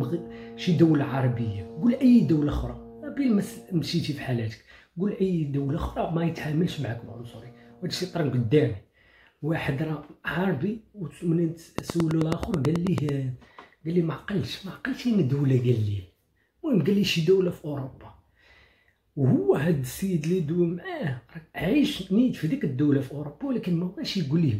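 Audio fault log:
11.78 to 13.10 s, train of clicks: about fifteen near-identical pulses tick over the sound at a steady 9.2 per second, peaking roughly 15 dB above the surrounding audio. The even spacing and repeated shape point to a likely cause of interference or a faulty connection.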